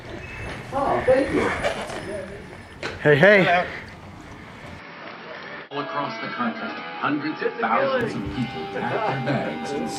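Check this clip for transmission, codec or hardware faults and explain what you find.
Input switched to a poorer device, likely, from 4.79 to 8.01 s: with no gap or level jump, the band stops near 5.6 kHz, turning dull, with a new noise floor about 35 dB down.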